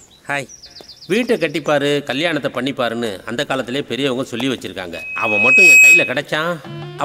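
From 4.93 to 6.20 s, loudspeaker feedback squeal: the microphone re-amplifies its own loudspeaker until a 2.5 kHz tone takes over, swelling for under a second to around 15 dB above the sound. A spectrogram shows one brightening horizontal line; the waveform's envelope balloons.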